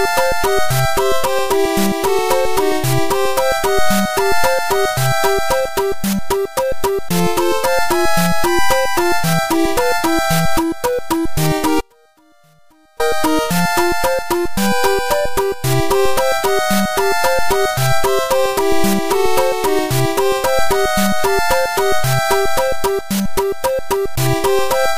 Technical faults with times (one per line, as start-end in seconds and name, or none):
11.81-13.00 audio dropout to a faint residue